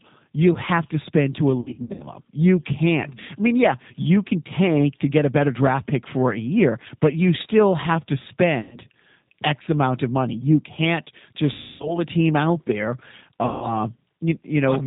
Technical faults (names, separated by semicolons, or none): G.729 codec; VoIP packet loss concealed by the speech codec